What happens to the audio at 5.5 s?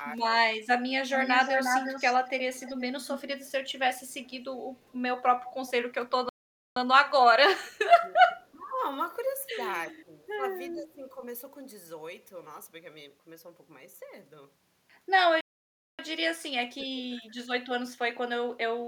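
At 5.5 s the clip is inside an echo leak running from 4.24 to 6.11 s. The likely cause is that a far end playing the call over a loudspeaker had an echo canceller that failed to fully suppress what its microphone picked back up, so that residue returned down the line. The result is a faint, delayed copy of the speech, trailing the original by 356 ms and sitting roughly 20 dB below it.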